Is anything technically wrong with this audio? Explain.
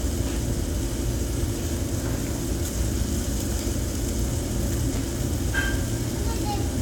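Yes, there's one glitch worth flagging. Between about 4.93 and 4.97 s you get chunks out of order. A short block of audio, around 10.7 ms long, got played late, after roughly three blocks that should have come after it. Nothing's missing, but the sequence is shuffled, leaving three hard joins. So you hear a quick jumbled stutter.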